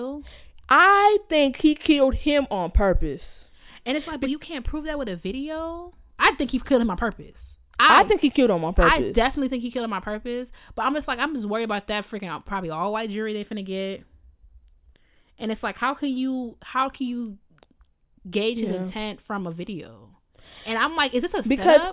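A speech recording, with nothing technically wrong with it.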